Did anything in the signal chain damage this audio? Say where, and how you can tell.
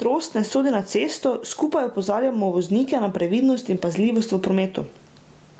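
Yes. There is gain pumping throughout the speech. The level swing is large, around 15 dB. Loud and quiet passages sit unnaturally close together, and the sound feels squashed. The likely cause is an input gain set far too high at the microphone stage, with a fast limiter clamping down on each peak. The 8 kHz top end comes from the call path and is not damage.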